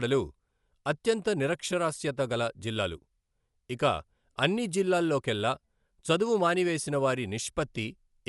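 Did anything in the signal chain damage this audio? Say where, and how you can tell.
Yes. Throughout, the speech sounds dull, with nothing above 11.4 kHz and a rough, fluttering noise around tones. This is likely Dolby Digital compression at the codec stage, starved of bits in a way that fits about 64 kbps.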